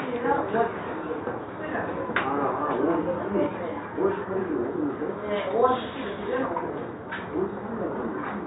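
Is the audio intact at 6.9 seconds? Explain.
Yes, the sound is intact at 6.9 seconds, with no audible fault at that moment.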